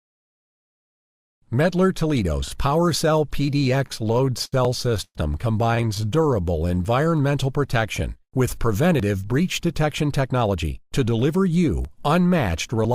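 Audio packets reaching the receiver late or unevenly left its jitter buffer repeatedly empty, producing repeated stalls (stutter) in two stretches. From 3.79 to 4.54 s the receiver ran dry nine times and bridged each gap by extending the last sound, filling 169 ms in all, about 23% of that span, with the longest hold at 69 ms. Nothing is dropped, but the audio drags and catches in a halting rhythm. A second, lighter burst from 5.75 to 6.78 s has twelve very short gaps, none longer than 18 ms, totalling 125 ms, or about 12% of the span. Between these, at 5.04 to 5.17 s, is a call audio freeze, likely caused by packets being held up in transit so that the buffer emptied completely. The receiver continues the last sound for a moment, then lets it fall to 50 ms of silence before playback resumes where it left off, inserting 107 ms of delay without losing any of the audio. Overlapping the end of the second stutter, from 6.45 to 7.23 s, a jitter buffer slow-down has the receiver rebuilding its reserve by repeating single pitch periods and fragments of pauses. 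This adds 83 ms and plays the audio at 90% speed with its pitch unchanged, so sounds are drawn out. Later, from 9.14 to 10.88 s, the buffer is holding more audio than it aims for, and a jitter buffer speed-up trims short pitch-period slices, around 150 ms in total. The passage runs at 108% speed with the pitch unchanged and sounds noticeably hurried.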